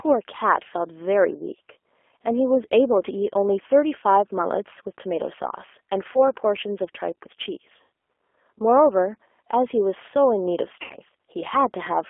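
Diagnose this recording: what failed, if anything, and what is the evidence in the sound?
The codec stage is degraded throughout by G.729 compression. The speech is confined to a telephone band of roughly 300 Hz to 3.4 kHz and has a plainly audible rough, synthetic texture. This fits an 8 kbit/s codec that rebuilds each frame from a vocal tract model and a few pulses.

On the network, VoIP packet loss is concealed by the speech codec at 6.13 to 6.27 s, at 7.82 s, and at 10.82 to 10.96 s. These gaps fit about 20 ms, 100 ms and 80 ms of missing packets. The decoder extrapolates from its last pitch and filter, so the sound is stretched into a buzzy tone or coloured noise that fades before recovering.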